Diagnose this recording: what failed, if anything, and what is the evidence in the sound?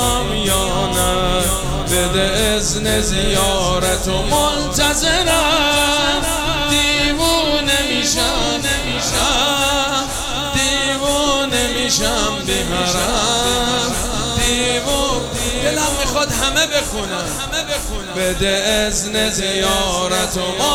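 A level-tracking buzz near 345 Hz runs throughout, consistent with a processing-stage filter restarted on every block, likely 128 samples, each starting from silence.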